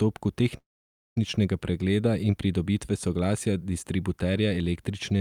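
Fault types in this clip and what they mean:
Call audio freeze: from 0.57 to 1.18 s the sound stalls, trailing off into about half a second of silence, then resumes where it stopped with nothing lost. Likely delayed packets emptied the jitter buffer, pushing everything after back by 0.59 s.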